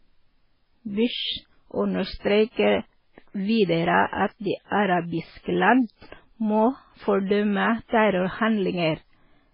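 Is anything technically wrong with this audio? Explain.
Yes. The speech has two related faults: damage from heavy lossy compression throughout, and two short pre-echoes.

Across the whole clip nothing is heard above about 5.2 kHz, and the sound is watery and swirly, with consonant hiss turning metallic. This is likely MP3 compression at a very low bitrate, around 16 kbps. The encoder ran short of bits, cut the treble at a fixed point and dropped weak frequency lines that flicker between frames. A simple low-pass filter would dull the sound without this warbling.

Pre-echo occurs from 4.07 to 4.13 s and from 4.66 to 4.72 s. Each time, a short hiss of roughly 55 ms leads a sharp onset, and the attack itself sounds smeared. The codec spread its noise across a whole block, so noise sized for the loud attack leaked into the quiet moment just before it. Unlike a click or a reverb tail, the artefact comes before the sound it belongs to.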